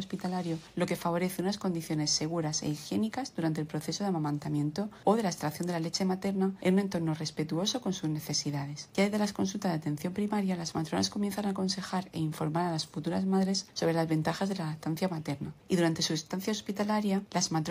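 No technical fault can be heard anywhere in the audio, and the signal stays steady and intact throughout.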